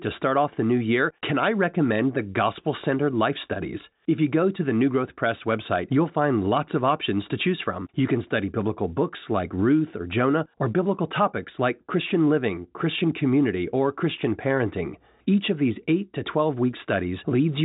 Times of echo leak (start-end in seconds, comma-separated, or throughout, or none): none